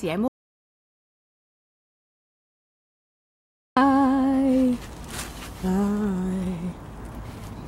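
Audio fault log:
0.28–3.77 s, audio dropout to silence: the sound cuts out abruptly and returns mid-flow after about 3.49 s of silence with no room tone, likely because the input was lost while recording continued. On a waveform it is a near-flat line; on a spectrogram, a fully blank band.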